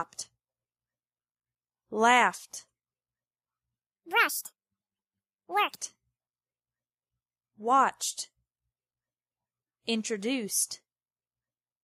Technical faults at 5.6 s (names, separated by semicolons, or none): section at the wrong speed